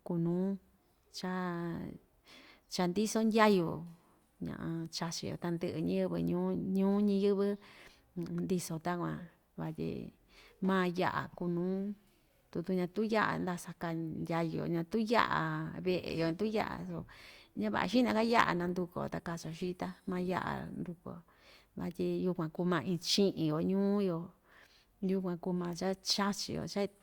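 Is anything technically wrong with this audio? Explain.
Yes. From 15.7 to 21.7 s the adaptive stream switches to a lower bitrate. The connection slowed, so the player fetched a leaner encode, consistent with Opus dropping from 64 to 32 kbit/s. The speech abruptly takes on more codec artefacts with no gap for those six seconds.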